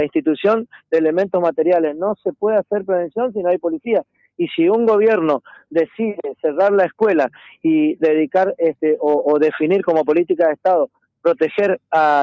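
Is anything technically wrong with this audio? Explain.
No, nothing is technically wrong with this audio, which has passed through a call's microphone processing with nothing above 8 kHz.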